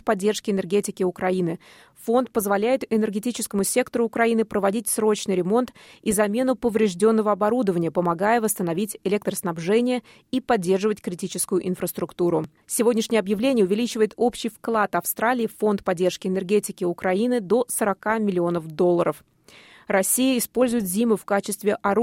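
The audio has two brief jumps, at 7.00 s and 12.44 s. Each is a jump in the sound with no gap of silence. Only a very short stretch is missing each time, around a millisecond and a half. The likely cause is a dropped buffer (overrun). The recording software fell behind, the hardware overwrote a block of samples before it was saved, and the audio on either side was joined directly.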